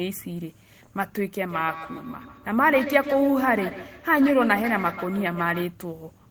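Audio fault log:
1.49–5.75 s, feedback echo between two devices: the speech returns in distinct copies roughly every 150 ms, peaking about 10 dB below the direct sound and turning thinner and more ringing. Unlike room reverberation or a single codec echo, the repeats recur as a second device's loudspeaker feeds the other microphone.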